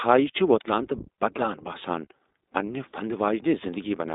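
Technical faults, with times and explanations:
Throughout, iLBC codec: the speech is squeezed into a phone band of roughly 250 Hz to 3.7 kHz, and each 20 ms frame is coded independently, so you get that slightly rough, synthetic edge, plainly audible here and consistent with iLBC's 15.2 kbps mode.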